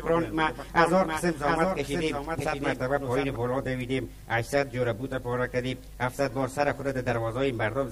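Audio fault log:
0.0–3.36 s, doubled audio track: A second copy of the same audio is mixed in, likely because it was captured again through a slower path or left out of step in an edit. That copy trails the original by roughly 0.7 s at about 5 dB lower, so every event is heard again a moment later as a flat, full-band repeat with no decay or room colour. The doubling is already present when the clip opens and cuts out abruptly at 3.36 s.
2.37–2.41 s, damaged data in a compressed stream: Part of the encoded stream arrived corrupted, so the decoder misread the affected frames, lost sync, and had to hunt for the next valid frame header before playback resumed. This produces a brief disturbance of about 40 ms in place of the intended audio. It falls inside the doubled section.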